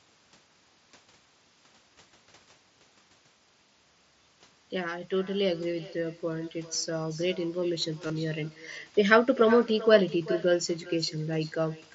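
From the start and all the way through, an echo with no canceller trails the speech by around 400 ms at about 17 dB down. It is a delayed, thinner copy rather than room reverb, so it repeats instead of smearing.

At 8.07 to 8.10 s, concealed Bluetooth headset packet loss fills a 30 ms gap with a held buzzy repetition that fits a few lost frames. It ends in a slight warble, unlike a silent dropout or a click.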